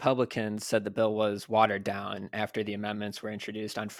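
Dropped samples at 0.58 s produce a single sharp click in the speech, a brief tick that sits apart from the surrounding sound and shows as a thin vertical line across the spectrum. The likely cause is a tiny gap in the stream, about 0.7 ms, so the waveform leaps straight from one value to a later one. That step is far too short to remove any audible sound, but the abrupt discontinuity is heard as the click.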